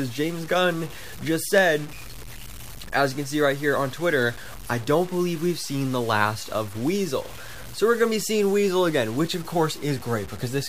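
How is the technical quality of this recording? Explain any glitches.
The recording's technical quality is poor, with grainy distortion present from start to finish. Low bit depth without dither runs throughout the clip. The grit follows the level of the sound, which points to the likely cause: the signal was truncated to about 6 bits with no dither added. The rounding error stays locked to the waveform, and the resulting distortion sits only about 20 dB below the signal. Quiet passages turn rough and sandy, and the faintest parts sputter between steps or drop out to silence.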